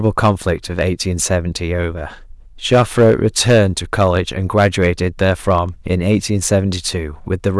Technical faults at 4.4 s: hard clipping

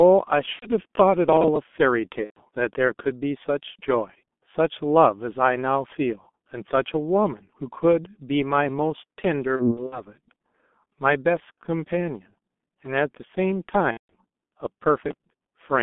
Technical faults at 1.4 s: G.723.1 codec; processor overload crackle

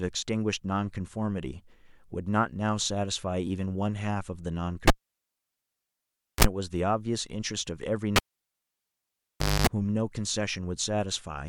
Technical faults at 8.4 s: cable pulled and plugged in

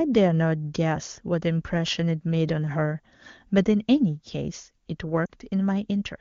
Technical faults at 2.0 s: CD scratch ticks

